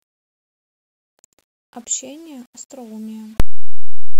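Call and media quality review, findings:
Speech, 3.40 to 4.20 s (runs to end): abrupt, very loud, harsh buzzing distortion; soft sounds come out as loud as strong ones. Likely cause: signed and unsigned mixed up in the 8-bit sample handling. The flipped top bit turns each zero crossing into a full-range jump.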